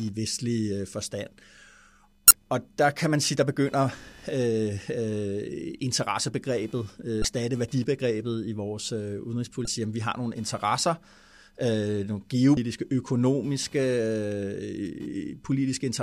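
Running under the whole clip is computer activity noise: a faint buzzy, chirpy texture pulsing at around 500 Hz and sitting roughly 35 dB below the speech. It rises and falls with what the machine is doing, not with the talking, because processor or graphics load is shifting the shared ground the audio circuit relies on. It's quiet.

On top of that there are four short blips from damaged data in a compressed stream, each about 30 to 35 ms long. The first is at 2.28 to 2.31 s, just before "og der kan man". The second is at 7.21 to 7.25 s, right before "værdibegrebet i vores øh". The third is at 9.64 to 9.67 s, between "værdibegrebet i vores øh" and "sige at vi har". The last is at 12.54 to 12.57 s. In each spot the decoder hit corrupted frames, lost sync and had to hunt for the next valid header, so you get a brief glitch.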